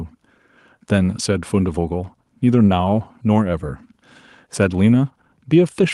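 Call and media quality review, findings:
No faults found in this speech recording.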